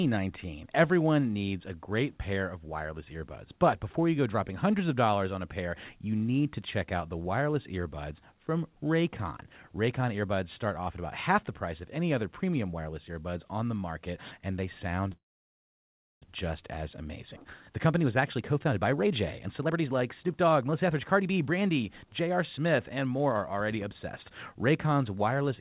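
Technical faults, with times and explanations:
15.12–16.24 s, call audio freeze: The sound stops and a short smear of the last moment carries on before falling to about 1.02 s of silence, then resumes exactly where it left off, so the clip is delayed by about 1.1 s but nothing is lost. This likely comes from delayed packets draining the jitter buffer. On a spectrogram, a brief band fades into a blank column cut off at 4 kHz like the rest of the G.711 call audio. The waveform shows a flat gap.
17.69–23.90 s, jitter buffer speed-up: The sound runs at about 118% speed with unchanged pitch and comes across as hurried. The receiver's buffer held too much audio, so it trimmed many short pitch-period slices in succession to catch up, removing about a second in total. On a spectrogram, harmonics keep their spacing while syllable-scale structures are compressed horizontally. The waveform shows tiny splice points.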